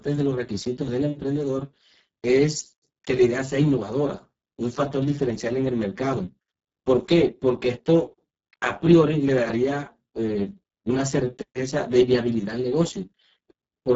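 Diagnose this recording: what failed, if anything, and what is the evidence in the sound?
The codec stage failed: the speech passed through the Speex codec at a very low setting, which fits a bitrate near 6 kbps. The excitation is starved of bits, so the speech sounds hoarse and noisy throughout, with nothing above 7.7 kHz.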